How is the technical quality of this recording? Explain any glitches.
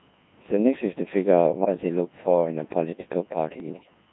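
The technical quality is poor. The whole recording passes through a very low-rate digital voice codec, and two bursts of transmission errors damage it further.

Throughout, the speech sounds robotic, buzzy and heavily smeared, with the damage plain from start to finish. This is the Codec 2 vocoder, at a rate that fits about 1.6 kbit/s. It sends only pitch, voicing, level and a rough spectral shape, then rebuilds the voice from sine waves, so the original waveform is lost.

From 1.59 to 1.74 s, and again from 3.6 to 3.94 s, the voice lurches in pitch and loudness and breaks into warbling, bleepy gibberish. These are bit errors on digital voice radio. Corrupted bits scramble the parameters of whole frames, a high error rate in the first burst, a lighter one over the longer second.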